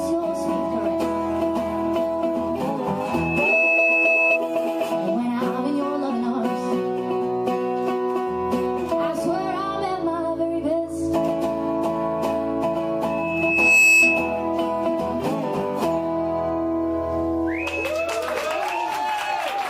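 At 3.00 s a loudspeaker feedback squeal starts: a steady 2.6 kHz tone that swells over about half a second to roughly 5 dB above the audio and stops at 4.39 s. The microphone is hearing its own loudspeaker, and at 2.6 kHz the loop gain exceeds one, so that frequency keeps reinforcing itself. It returns at 13.09 s, same pitch, building a little more slowly to about 10 dB above the audio before cutting off at 14.48 s.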